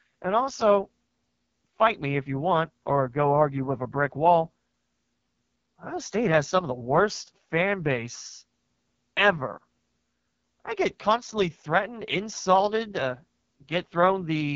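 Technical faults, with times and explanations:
Throughout: AMR wideband (HD Voice) codec. The speech sounds rough and raspy, with nothing above 7.2 kHz, which fits the lowest 6.6 kbit/s mode. At that rate the vocal tract model is starved of pulses, and the top band is just shaped noise.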